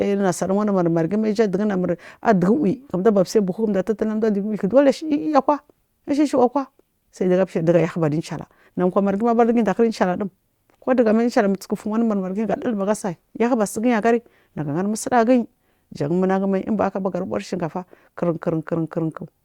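No technical faults can be heard anywhere in this recording of speech.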